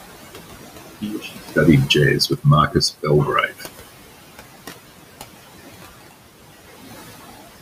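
Throughout the speech, a noise suppressor pulls down the frequency bands it judges to be steady noise, cutting the room noise by about 16 dB. That noise sits about 14 dB under the speech. It drops away between phrases and swells beneath them.

The same suppressor also misreads parts of the speech as noise and turns them down. This happens from 1.01 to 1.39 s, from 2.28 to 2.45 s, and from 3.47 to 3.65 s, with dips of about 14, 16 and 11 dB. In these, around 0.15, 0.1 and 0.1 s of sound comes out faint and swallowed.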